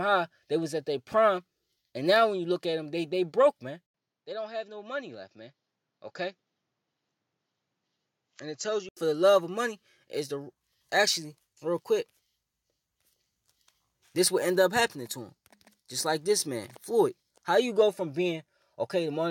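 From 3.86 s to 8.97 s the audio turns duller and about 10 dB quieter, with nothing above 7.4 kHz, a faint new noise floor, and an 80 ms gap at the switch. This points to the input likely switched to a poorer device, restoring at 8.97 s.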